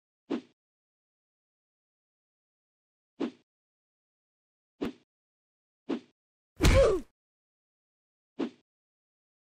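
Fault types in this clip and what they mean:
Repeated buffer: At 4.84 s a slice of about 11 ms, which fits a 512-sample buffer, plays twice back to back, costing roughly 10 ms of audio. It has a hard join, not the silent gap a dropout leaves.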